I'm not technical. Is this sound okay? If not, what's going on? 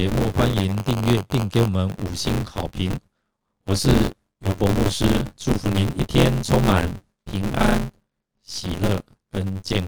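No. A steady robotic buzz, about 94 times a second, runs through the speech for the whole clip. This is buffer tearing: roughly half of each small audio chunk replays sound from about 20 ms earlier, which fits a 512-sample buffer.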